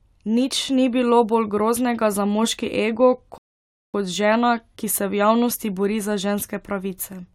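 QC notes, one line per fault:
3.38–3.94 s, rebuffering stall: the player's downloaded audio ran dry after "groznega za moški ego", so the speech drops to silence for 0.56 s, then resumes exactly where it stopped.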